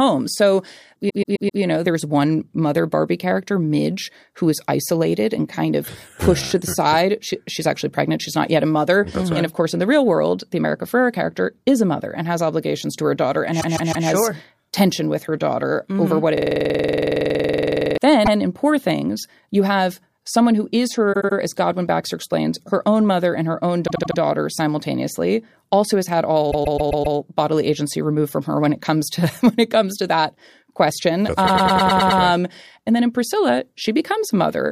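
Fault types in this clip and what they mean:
Repeated frames: short runs of compressed audio played again, heard as stutters, in blocks of 78 to 157 ms repeated one to seven extra times, such as just before "know there's one mother". Unlike a hang loop, each block is long and repeats only a few times.
System hang loop: the sound hardware kept cycling one tiny buffer while the system froze, 16.37 to 17.98 s, a 46 ms slice repeating about 34 times, a buzz near 21.5 Hz that fits a 2048-sample buffer, far faster and steadier than the frame stutters.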